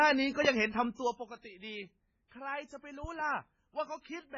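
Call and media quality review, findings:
Watery, swirly speech throughout with smeared consonants and no treble. Likely MP3 compression, heavily damaged, fitting a very low bitrate around 16 kbps. The encoder drops content above a fixed cut-off and gates weak frequency lines per frame. Spectrogram: hard ceiling at 7.4 kHz, speckled blocky holes below.

Loud pop at 0.45–0.48 s (single) and 3.04–3.23 s (two in succession), peaks roughly 10 dB above the speech, which continues underneath. Likely an electrical transient such as a plug, switch or driver glitch. Waveform: tall spikes. Spectrogram: full-band vertical lines.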